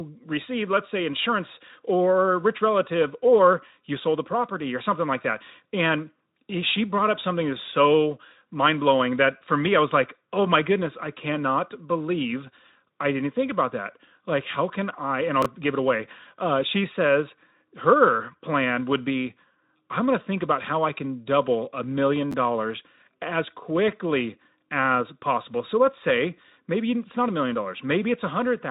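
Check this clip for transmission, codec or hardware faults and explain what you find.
Two short jumbles of chunks out of order occur in this speech, carried through a Speex codec whose band stops near 3.8 kHz. At 15.42 s, just before "give it away", a chunk of about 10.7 ms plays two chunks late. At 22.32 s, between "can double a million" and "dollars as quickly as", one plays a chunk late. Nothing is lost, but the order is wrong across hard joins and the sound briefly garbles.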